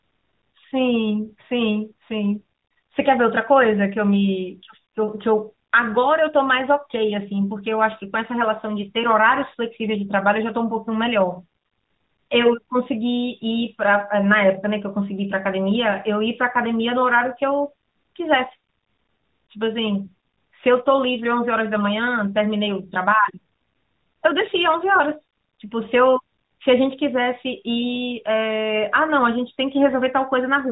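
No technical faults are audible.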